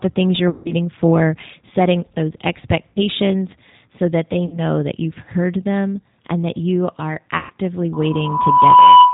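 Throughout, the speech carries plainly audible G.729 codec damage. The band stops at 4 kHz, and the voice has the slightly rough, synthetic texture of a coder that rebuilds each 10 ms frame from a vocal tract filter, pitch predictor and a few pulses, which fits 8 kbit/s.

VoIP packet loss concealed by the speech codec occurs at 0.50–0.73 s, 2.90–2.99 s, 4.46–4.59 s and 7.38–7.52 s, covering about 150, 60, 60 and 120 ms of missing audio. Each time the decoder stretches its last pitch and filter into a fading buzzy tone or coloured noise, and the speech stays weak or distorted briefly after it resumes.

A loudspeaker feedback squeal starts at 7.93 s and runs to the end. A single 991 Hz tone swells over roughly a second to about 15 dB above the speech, as the microphone-to-speaker loop gain exceeds one at that frequency.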